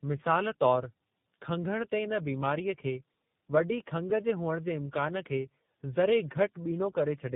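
From start to finish, the speech carries tandem speech coding damage. It sounds like it went through two low-rate speech coders back to back, which fits AMR-NB and then iLBC, with a plain G.711 hop in between. The second coder is working on the first one's already mangled output, so you get a rough, warbly texture on top of the muffling. There's nothing above about 3.8 kHz, so it's firmly narrowband.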